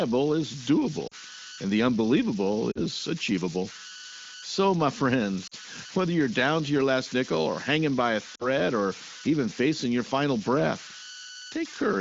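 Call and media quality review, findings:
Converter idle tones, whole clip: undithered delta-sigma converter locking into repeating bit patterns at low input, leaving a whistle around 1.5 kHz in pauses and grainy noise about 11 dB below the speech.

Lost AMR speech frames at 1.07–1.14 s (before "and the unbelievable"), 2.71–2.80 s, 5.47–5.54 s (before "whether you're down to") and 8.35–8.46 s (between "or hanging by a" and "or even facing your"): radio errors failing frame checksums, so the decoder repeats the last good parameters with falling gain. Each is a 40 ms drop toward near silence, consistent with two 20 ms frames, followed by briefly rough onset. The AMR wideband (HD Voice) path at 15.85 kbit/s adds only light codec colouring.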